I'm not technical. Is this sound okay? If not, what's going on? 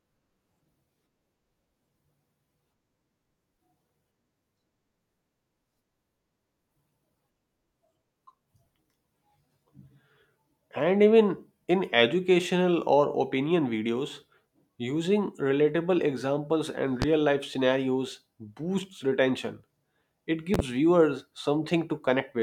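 No. A sudden electrical jolt, likely from a plug, switch or static, was added to the recording, causing a loud pop. One sharp pop hits at 17.02–17.05 s, between "using relatable examples and" and "life scenarios boosts retention". A quick double pop follows at 20.54–20.62 s, with the speech continuing underneath.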